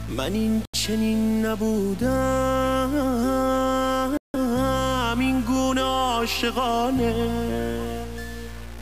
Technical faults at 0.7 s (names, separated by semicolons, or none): low bit depth without dither; Bluetooth stall